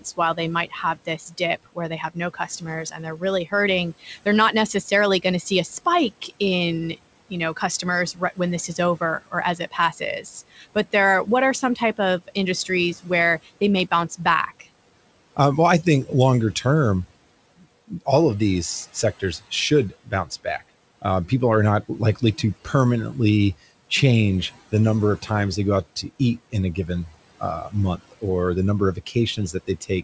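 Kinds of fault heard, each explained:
Speech cut by the noise suppressor: the suppressor mistook soft parts of the speech for background and cut them by up to about 19 dB, so consonants and word endings sound swallowed.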